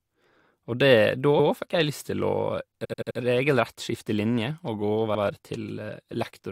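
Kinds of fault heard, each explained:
Repeated frames: a short stretch of the encoded stream gets played again, so the speech stutters. At 1.39 s a block of about 107 ms comes back once. At 2.84 s an 85 ms chunk loops four extra times through about 3.18 s, which adds roughly a third of a second. At 5.14 s another 85 ms block repeats once. Those block lengths fit runs of a few codec frames.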